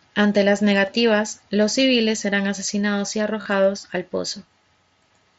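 Concealed Bluetooth headset packet loss: a blip at 0.86 s, then 3.42 to 3.46 s, filled with repeated recent waveform that buzzes briefly.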